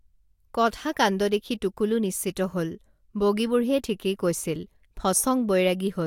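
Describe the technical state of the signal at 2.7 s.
At 2.7 s the speech signal is intact, with no dropout, clipping, distortion or other fault to be heard.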